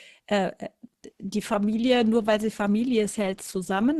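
A speech clip. At 1.28 s the quality falls suddenly and stays low to the end, with no gap. Codec artefacts rise. This is an adaptive stream at a lower bitrate, consistent with a switch from about 64 to 16 kbit/s Opus. At 1.73 s there is one sharp click, a thin vertical line across the spectrum. Its likely cause is dropped samples. A tiny fraction of a millisecond is missing, so the waveform jumps.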